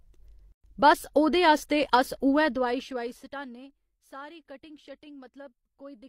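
A speech clip with a gap at a join of encoded pieces: from 0.52 to 0.64 s, just before "बस ओह्दे आस्तै", a gap of about 118 ms opens with smeared edges. Speech then resumes exactly where it stopped. Unlike a dropout, no audio is lost. Encoder start delay and final-frame padding were left in when the separately encoded pieces were joined.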